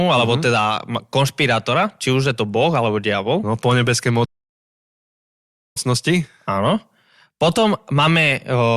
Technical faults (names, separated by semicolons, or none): playback stall